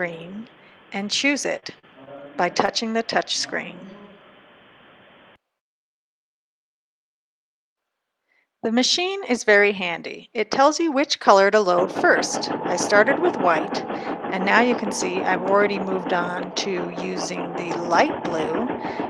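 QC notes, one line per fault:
1.59 to 2.70 s, repeated packet loss (robotic sound): over about a second the audio keeps dropping out in five short holes, the longest about 39 ms and roughly 100 ms missing in all. Each hole gets papered over by stretching the last bit of sound forward, so about 11% of that stretch is patched rather than real. The gaps land so close together that it comes across choppy, with little pieces just gone.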